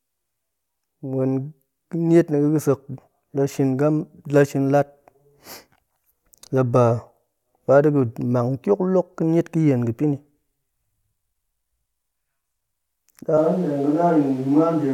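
At 13.38 s the speech turns abruptly roomy and hollow, the sound of a switch to a distant microphone that lasts to the end. The likely cause is that the close microphone's signal dropped out, leaving a pickup further away. The overall level stays about the same, but low end thins and background noise rises to about 30 dB below the speech. A spectrogram shows weaker bass, smeared reverberant tails and a raised noise floor filling the gaps from that point, while the waveform keeps similar peaks.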